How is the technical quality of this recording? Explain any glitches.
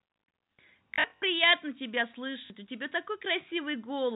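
The speech has two audible glitches on a narrowband telephone-style line that cuts off at 4 kHz. From 0.94 to 1.22 s it breaks into a buzzing robotic stutter, with about 160 ms lost in bursts of up to 60 ms. It stutters again briefly at 2.46 to 2.5 s. This is packet loss with last packet repeated: the receiver replayed the previous packet to fill each gap, producing a 50 Hz buzz, which fits 20 ms packets.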